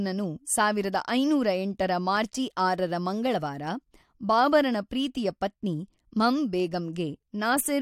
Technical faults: none

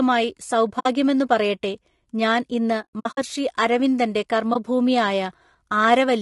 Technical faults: low-delay AAC compression; AAC frame loss with muting

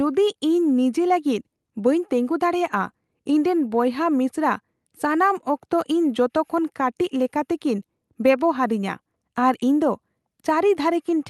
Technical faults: none

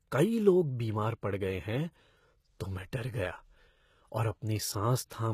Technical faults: HE-AAC compression

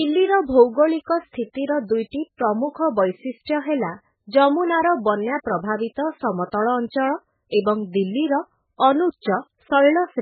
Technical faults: MP3 compression

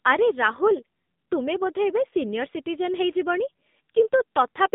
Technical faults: AMR narrowband mobile codec

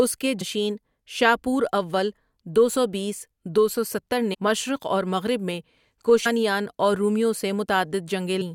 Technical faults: damaged data in a compressed stream

